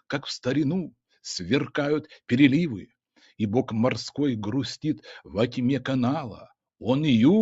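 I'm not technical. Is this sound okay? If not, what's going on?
Yes, the sound is fine: it went through a normal video or voice call, which keeps frequencies up to 8 kHz and trims the very deepest bass, and nothing has gone wrong along the way.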